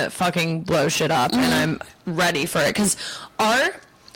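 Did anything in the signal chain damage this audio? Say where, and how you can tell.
Yes. A gain stage ahead of the converter or sample-format conversion drove the speech about 20 dB past full scale, causing hard clipping for the whole clip. Roughly a fifth of the samples hit the ceiling and were cut flat. Those squared-off peaks add strong high harmonics, so every loud syllable carries a harsh, buzzing fuzz rather than occasional crackle. The distortion follows the level of the speech, which points to overload rather than a noisy source.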